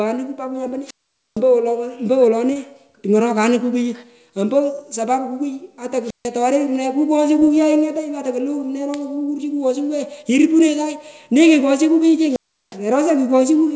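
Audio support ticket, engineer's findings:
Short concealed packet loss at 0.64–0.67 s, 2.53–2.57 s and 7.39–7.43 s. Brief smear or wobble each time. About 20 ms of audio missing per event, patched by the jitter buffer and decoder extending the preceding sound, then crossfading back to real audio.

Wireless microphone squelch dropout at 0.84–1.41 s, 6.02–6.30 s and 12.27–12.79 s. Hiss rises, then near silence of about 0.46 s, 0.15 s and 0.36 s. The radio link to the FM microphone fades, and the receiver squelch mutes the output until signal recovers. The G.722 call path at 64 kbps passes nothing above 8 kHz.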